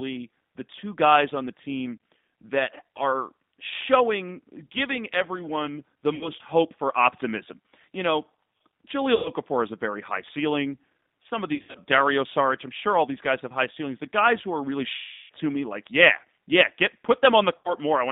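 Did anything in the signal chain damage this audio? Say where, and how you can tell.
Yes. At the codec stage the whole clip has passed through a G.729 codec at 8 kbit/s. The band runs only from about 150 Hz to 3.7 kHz, and the plainly rough, synthetic texture comes from rebuilding speech from a filter, a pitch predictor and a few pulses per frame.

At the network stage, VoIP packet loss concealed by the speech codec appears at 6.15–6.31 s (after "showing giving everyone the"), 9.15–9.30 s, 11.55–11.79 s (scattered gaps), 14.98–15.32 s (before "to me like yeah") and 17.57–17.73 s (after "like yeah yeah get"). The decoder stretches the last sound into a buzzy tone or coloured noise that fades.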